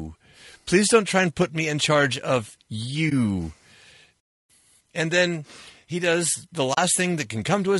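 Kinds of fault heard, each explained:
Low-delay AAC compression: short-frame coding at a low bitrate is the likely cause, leaving the speech rough and grainy, with noise between the harmonics throughout.
AAC frame loss with muting: the decoder zeroed lost frames, so the sound fades into brief soft-edged holes after "me in charge of" and "then he does the".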